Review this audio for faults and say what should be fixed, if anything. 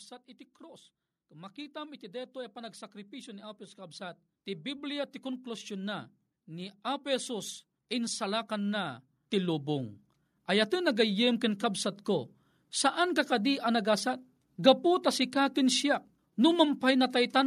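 Automatic gain rising runs from 0.58 s to 11.9 s. The level control judged the incoming speech too quiet and pushed its gain up slowly, by about 18 dB over those eleven-odd seconds. Because the whole signal is being amplified, the voice and the room noise beneath it swell together, so the background grows steadily louder. To prevent it, set the input gain correctly before recording and disable automatic gain control, or give it a fixed target level.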